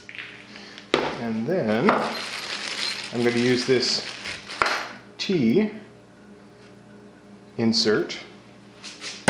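Resampler restarted on every block, running through the whole clip: the audio carries a steady train of small ticks at 4.0 Hz, one every quarter second, which fits 250 ms processing blocks. Each block appears to have been rate-converted in isolation, likely a 24 kHz to 48 kHz upsample, so the interpolation filter had no real neighbouring samples at either edge. The resulting discontinuity at every block boundary is what produces the regular ticking beneath the signal.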